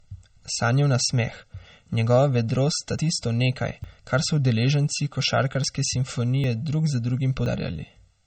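From start to finish the speech has a hollow, phasey colour from channel delay (comb filtering): one channel runs roughly 1.5 ms behind the other, and summing them to mono cancels energy at evenly spaced frequencies, the first notch falling somewhere around 300 Hz. Unlike a room echo or reverb, nothing trails after the syllables. The tone is simply carved by fixed notches that stay put whatever the pitch does.

Also throughout, the upper band has the swirly, smeared texture of a very lean MP3. This is low-bitrate audio saved at a high bitrate, most likely a 32 kbit/s MP3 re-encoded at 192 kbit/s. A plain low-pass filter would give the same ceiling but leave the remaining sound clean. Here the first encode's artefacts persist, and the larger second encode cannot bring back what was discarded.

Five dropped buffers (overruns) cut into the speech, each an abrupt skip forward with no gap of silence. 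The likely cause is samples not being collected before the hardware overwrote them. The jumps come at 2.98 s, losing about 70 ms; at 3.84 s, between "tisto nekaj" and "kar so udeleženci"; at 5.64 s, just after "nekaj kar so udeleženci"; at 6.44 s, these three each losing about 20 ms; and at 7.46 s, after "drug za", losing about 70 ms. A dropout that inserts silence would leave a hole. These splice the two sides together.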